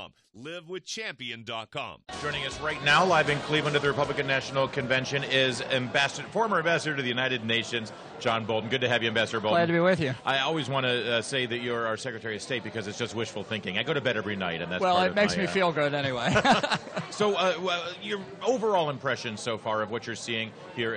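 Nothing in this audio stood out as a technical problem on listening.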